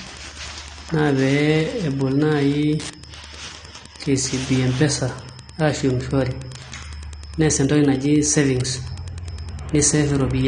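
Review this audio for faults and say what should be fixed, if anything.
Wi-Fi interference runs through the whole speech recording as a steady tick repeating every 102.4 ms, just under ten per second, sitting well below the speech, roughly 25 dB down. A nearby Wi-Fi radio's beacon is being picked up and rectified by the audio circuitry. On a spectrogram it appears as thin, evenly spaced vertical lines spanning a wide frequency range, and on a zoomed waveform as small regular spikes between syllables. Moving the radio away from the audio path and using shielded, properly grounded cabling would prevent it.

AAC compression damage is plainly audible from start to finish. Nothing survives above 9.7 kHz, so the speech sounds dull and closed-in, with a smeared, watery texture. The likely cause is AAC-LC encoding at a low bitrate, around 32 kbps, which forces the encoder to drop the top band and quantise the rest coarsely. 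A spectrogram shows a hard horizontal ceiling at 9.7 kHz. Encoding at a higher bitrate, or keeping an uncompressed master, would prevent it.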